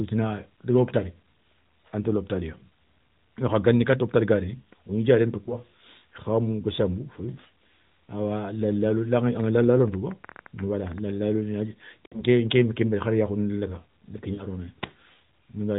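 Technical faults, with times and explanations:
5.44–5.56 s, 12.06–12.23 s, 14.34–14.45 s, lost AMR speech frames: radio errors corrupted frames, so the AMR narrowband decoder repeated the last good pitch and vocal tract settings at falling gain. Between "wo gni diaréné" and "khamou gassamou" the sound briefly dips, which fits one lost 20 ms frame. Near 12.1 s it smears and fades, fitting about 60 ms lost. After "ndi ké" a shorter drawn-out warble fits about 40 ms lost.
9.18–10.99 s, train of clicks: roughly twenty similar pulses, about 9.4 per second at uneven spacing, peaking about level with the speech and ticking through the sound and its gaps. This is likely interference from nearby equipment or a faulty connection or power supply repeatedly injecting a spike into the signal.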